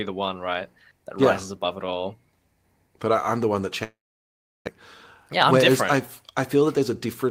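From 3.83 to 4.69 s, a long network dropout likely cut off the incoming speech. The last sound is stretched into a fading buzz that leaves about 0.72 s of silence. When speech resumes, roughly 600 ms is simply gone, and timing shifts by around a fifth of a second.

From 6.54 to 7.24 s, a jitter buffer speed-up drains excess buffered audio by repeatedly cutting out tiny pitch-period slices, removing roughly 70 ms in total. The speech plays at 110% speed with unchanged pitch, so this stretch sounds noticeably hurried.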